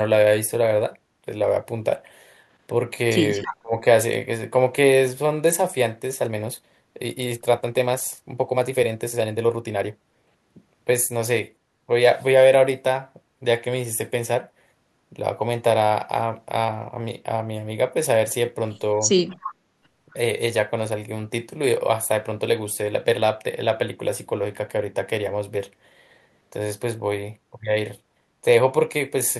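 From 3.43 to 3.56 s a faint second copy of the speech trails the original by 270 ms, roughly 10 dB quieter. This echo leak is most likely a far-end speakerphone whose echo canceller let part of its microphone pickup return down the line. It differs from room reverberation: instead of a smooth decaying tail, a distinct, delayed repeat of the same sound appears.

Overlapping it, from 3.47 to 3.84 s, the main speech is heavily attenuated, at its deepest by around 25 dB, for roughly 300 ms in total. This is speech suppressed in double talk. The likely cause is the echo canceller failing to separate the local talker from the returning echo while both were present and ducking everything. Unlike a network dropout, it coincides with the echo burst.

From 6.18 to 10.48 s the pace jumps to 1.35 times normal while the pitch stays where it was, a time-stretched section. Software likely squeezed this stretch to fit a shorter length, discarding small slices to hold the pitch, which makes it sound rushed. 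A plain speed-up through resampling would raise the pitch as well, and here it does not.

From 19.28 to 19.55 s the same echo leak returns, again 270 ms behind and about 10 dB down.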